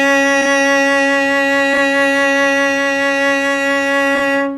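A short music clip with three brief spots where frames play out of order, at 0.41–0.47 s, 1.73–1.79 s and 4.15–4.21 s. Each time, two neighbouring single frames, which fits 20 ms frames, got swapped before decoding, so a tiny slice plays with its halves reversed. You hear a quick garbled flutter, but the timing doesn't drift because nothing is actually lost.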